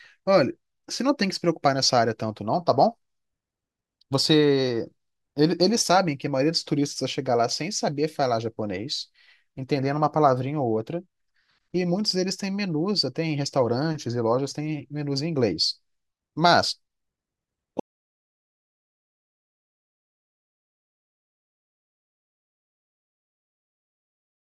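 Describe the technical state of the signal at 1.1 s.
Nothing at 1.1 s points to a fault; the audio is intact at that moment.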